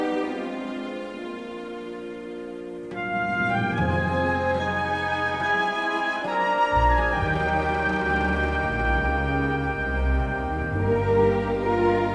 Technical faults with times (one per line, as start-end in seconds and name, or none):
none